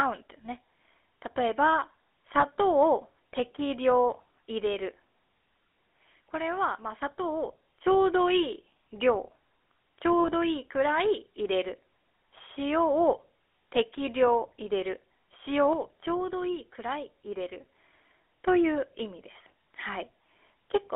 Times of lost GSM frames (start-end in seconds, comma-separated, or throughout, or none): 2.40-2.43, 10.20-10.30